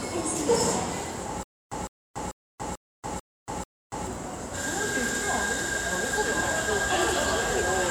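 A stutter with silent gaps runs from 1.43 to 4.07 s. The same 156 ms burst of sound plays six times, each followed by about 285 ms of dead digital silence, so it returns every 441 ms at a steady pace. The likely cause is a stalled player or stream that replayed its last buffered fragment on each retry and then ran dry. Whatever audio belonged in those gaps never plays.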